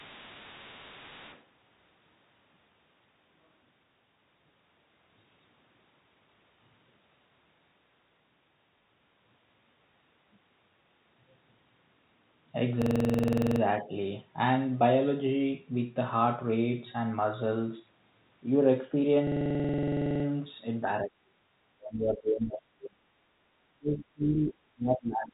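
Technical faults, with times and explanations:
0.00 to 1.44 s, other side's voice leaking through: a second, fainter voice sits about 20 dB under the talker, likely loudspeaker echo the canceller left in the microphone signal. On a spectrogram it shows as a weak, separate harmonic pattern beneath the main one.
12.82 to 13.61 s and 19.27 to 20.25 s, system hang loop: a 46.44 ms slice repeats exactly, 17 then 21 times, giving a rattling stutter at 21.5 Hz. That fits a 2048-sample ring buffer cycling while the system froze. The waveform shows identical blocks tiled edge to edge.
21.02 to 21.47 s, 21.74 to 23.05 s and 23.72 to 25.33 s, speech suppressed in double talk: the talker's level dips sharply, by around 30 dB at worst, likely the echo canceller clamping down while both sides spoke. The waveform envelope collapses in chunks.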